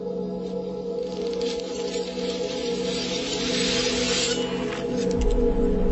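Throughout, a wrong sample rate plays everything at half speed and an octave low, consistent with 44.1 kHz material clocked near 22 kHz. Spectrogram features sit compressed toward half their frequencies and stretched twice as long.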